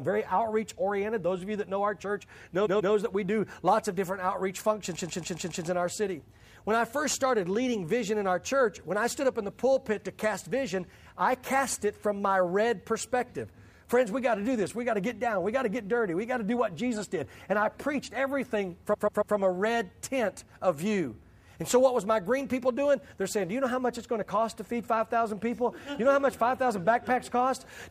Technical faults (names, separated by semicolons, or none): repeated frames